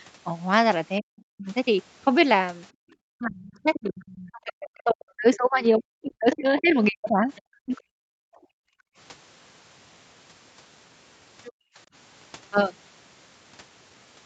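From 1.0 to 1.47 s the speech dips and breaks up, with cuts of up to about 40 dB totalling roughly a third of a second. This is speech suppressed in double talk. The likely cause is the echo canceller muting both sides at once while the far end was also talking.

At 2.73 to 2.86 s the room sound drops out by about 40 dB, then returns. This is background gated by the echo canceller. It clamped the microphone hard while the loudspeaker played.

From 3.14 to 7.73 s the double-talk suppression returns for much longer. About 3 s of the speech is chopped or pulled down, again by up to about 40 dB.

During that stretch, the other side's voice leaks through. At 3.54 to 4.31 s it sits about 15 dB below the speech. At 6.32 to 7.81 s it sits about 20 dB below. It is likely residual loudspeaker echo the canceller missed.

From 8.01 to 8.97 s the background is gated again, down about 40 dB for roughly a second.

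At 11.44 to 11.52 s a brief scrap of leaked far-end voice appears, about 25 dB down. The background gating follows straight after, from 11.52 to 11.78 s. Throughout, nothing is heard above 8 kHz.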